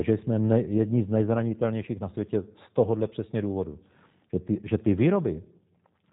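From start to finish the speech carries G.729 codec damage, plainly audible, which fits an 8 kbit/s G.729A stream. Nothing passes above 3.8 kHz. The speech is rebuilt from a vocal-tract filter, a pitch predictor and a few pulses per frame, so it sounds rough and slightly synthetic. Simple low-pass band-limiting would only dull the sound. Here the parametric resynthesis adds the buzzy, slightly mechanical grain.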